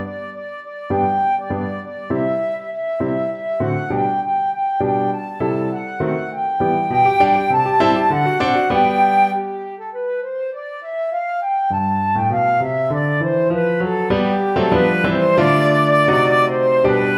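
No technical faults can be heard anywhere in this audio.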